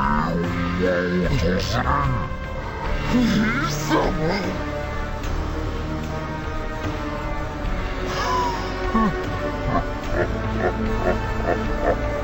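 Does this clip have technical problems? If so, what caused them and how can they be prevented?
Yes: stereo read as mono runs throughout, with interleaved left-right samples played as one channel, so everything sounds half speed and an octave low. Check the channel count before decoding.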